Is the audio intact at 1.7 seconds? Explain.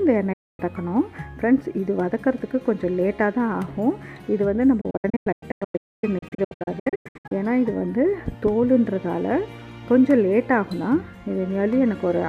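Yes, at 1.7 seconds the audio runs cleanly, with no dropout, click, distortion or other disturbance.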